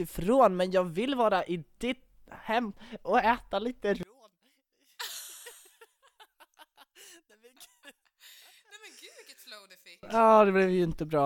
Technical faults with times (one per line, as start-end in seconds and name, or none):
4.03-10.03 one channel inverted